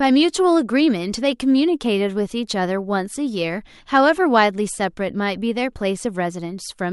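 From 0 to 3.32 s, the resampler restarted on every block. Each 20 ms block was converted in isolation, leaving edge errors. A 50 Hz buzz rides under the speech.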